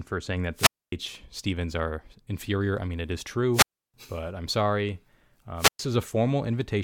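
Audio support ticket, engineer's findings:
Wireless microphone squelch dropout at 0.54–0.92 s, 3.53–3.94 s and 5.57–5.79 s. Analogue FM mic's RF signal fading below the receiver squelch threshold, so the receiver mutes its output. Brief hiss or static rise, then near-silent holes of 0.26, 0.32 and 0.11 s before the speech returns.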